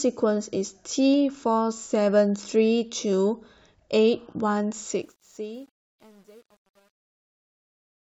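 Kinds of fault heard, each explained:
Truncation distortion on a fade: The speech fades out over the last few seconds, from about 5 s. The stage handling that fade keeps too few bits and adds no dither, which fits roughly 9-bit resolution. From 4.85 s the decaying waveform starts snapping to coarse steps. The damage is worst from 5.42 s to the end at 8.01 s. There the quiet tail turns gritty instead of fading away cleanly.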